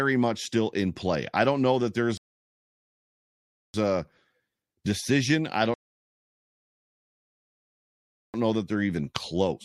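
Two rebuffering stalls: the speech drops to silence at 2.17–3.74 s and 5.74–8.34 s while the player waits for data, then resumes right where it stopped.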